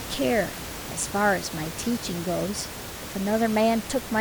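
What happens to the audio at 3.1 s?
Nothing goes wrong at 3.1 s: the speech runs on intact there, with only the room noise, about 11 dB below the speech, underneath it as part of the recording.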